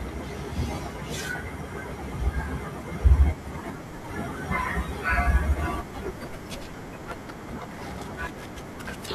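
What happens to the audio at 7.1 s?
At 7.12 s the speech jumps forward abruptly. There is no gap of silence. The sound on either side is butted together, and only a few milliseconds of speech are missing. The cause is likely a dropped buffer (overrun). The recording software failed to collect a block of samples before the hardware overwrote it. That block was lost, and the two ends were joined directly.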